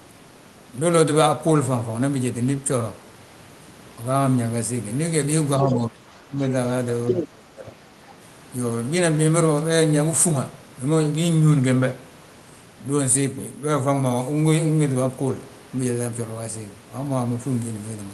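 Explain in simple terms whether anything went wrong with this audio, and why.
Two problems can be heard, both typical of a call where each side talks at the same time.

The first is speech suppressed in double talk. From 5.59 to 6.53 s, and again from 7.16 to 7.74 s, the talker's voice sinks noticeably in level. The likely cause is the echo canceller on the talker's device. While the other side was also speaking, it could not separate the talker from the loudspeaker sound, so it turned both down together. The first dip lasts about a second; the second is about half that.

The second is the other side's voice leaking through, briefly, from 7.09 to 7.26 s. For that short moment a second voice comes in at roughly the same loudness as the talker. It is likely sound from the device's own loudspeaker that the echo canceller failed to remove from the microphone. It overlaps the start of the second dip, so the talker fades just as the other voice appears.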